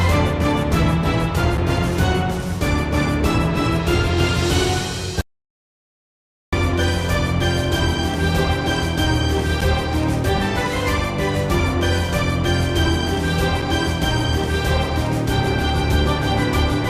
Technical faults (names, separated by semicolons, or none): gap between stream segments; audio dropout to silence